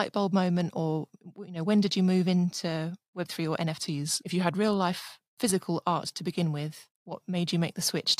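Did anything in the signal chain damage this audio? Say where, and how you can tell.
Yes. From 3.79 to 4.53 s the speech abruptly slows by about 6.3% and drops 113 cents, just over a semitone, then snaps back. That's a drift correction step, likely clock-sync software at the buffer stage jumping the playback rate to rebalance its buffer.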